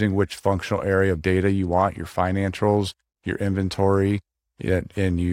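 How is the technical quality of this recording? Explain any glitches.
Listening through the recording, nothing stood out as a technical problem, so there are no glitches to explain.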